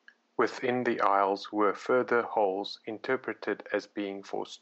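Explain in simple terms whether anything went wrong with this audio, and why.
Nothing went wrong here.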